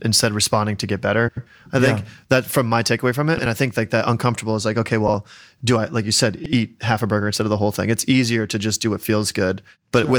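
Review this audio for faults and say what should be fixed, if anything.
Frames out of order: neighbouring runs of frames, each about the size of a four-frame group, reached the decoder in reverse order and were played that way. Each short stretch plays with its halves exchanged and sounds like a garbled flutter, at 1.28–1.47 s, 3.37–3.46 s, 5.07–5.14 s and 6.43–6.53 s, with swapped blocks of 92.9, 62.4, 62.4 and 82.7 ms. No time is lost. To prevent this, reorder frames by sequence number in the receive buffer before decoding.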